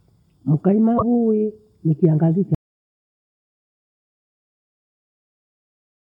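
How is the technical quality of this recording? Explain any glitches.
The recording has two clear glitches, one brief and one severe, and the second takes out most of the clip.

From 0.97 to 1.03 s there is a short glitch, likely a broken MP3 bit reservoir: after missing frames, the decoder borrowed bytes from the wrong frame, garbling roughly two 24 ms frames. On a spectrogram it shows as a brief break in the harmonic pattern.

At 2.55 s the audio drops out to silence and never returns, likely because the input was lost while recording continued. The waveform collapses to a flat line, and the spectrogram goes blank to the end, with no background noise at all.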